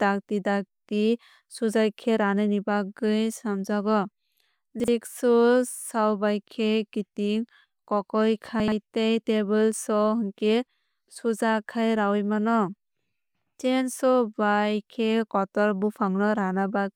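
At 4.80–4.88 s and again at 8.60–8.72 s, between "bai khe kiting kokoi" and "tei table", the speech has chunks out of order. A 40 ms block plays one, then two, chunks late. Each sounds like a brief jumbled stutter. The waveform shows three abrupt discontinuities at each, and the spectrogram shows vertical broadband lines with misaligned formant tracks.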